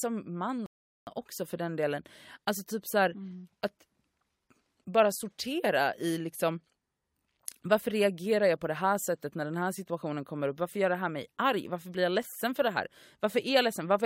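At 0.66 s the speech drops to silence for about 0.41 s, a rebuffering stall: playback ran dry, then resumed exactly where it stopped with "också för den delen".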